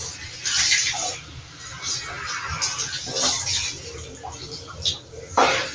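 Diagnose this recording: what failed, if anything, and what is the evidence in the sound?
Noise suppressor applied to sounds, throughout, in call processing: a speech-tuned suppressor treats steady sound as noise, so level pumps with swings of around 10 dB.

Sound cut by the noise suppressor at 0.14–0.44, 1.17–1.69, 3.78–4.23, 4.59–4.74 and 4.99–5.14 s: held portions sink about 5 to 7 dB while attacks pass.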